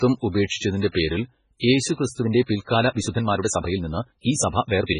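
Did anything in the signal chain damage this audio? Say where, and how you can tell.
Yes. At the codec stage, likely MP3 compression: heavy damage throughout and nothing above 10.4 kHz, which fits a very low bitrate, around 16 kbps, starving weak frequency lines.

In processing, likely a time-stretched section: from 2.18 s to the end the pace jumps to 1.35 times faster with pitch unchanged, as short pieces are dropped.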